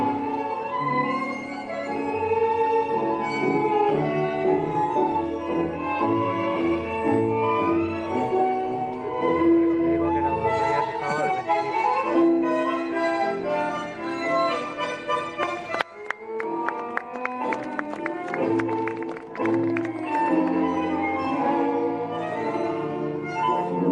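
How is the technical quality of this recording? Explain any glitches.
No glitches or technical faults can be heard anywhere here.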